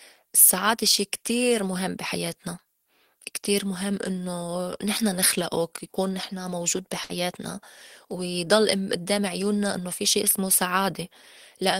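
A speech clip with one glitch: a burst of packet loss from about 7.03 to 7.12 s. A short run of packets never arrived in time, so the receiver covered roughly 59 ms by carrying the last bit of sound forward and fading it down. When the stream picks back up, about 60 ms of the original audio is gone, so you get a brief smeared patch and then a small jump ahead.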